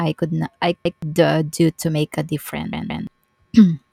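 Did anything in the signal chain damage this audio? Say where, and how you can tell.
Yes, a repeated buffer at the driver or buffer stage. Before "uh do to make" (0.85–1.02 s), a 0.17 s chunk sounds twice. After "do to make a" (2.73–3.07 s), it sounds three times. Waveform and spectrogram show identical blocks with hard seams, consistent with an 8192-sample buffer replayed when fresh audio arrived late.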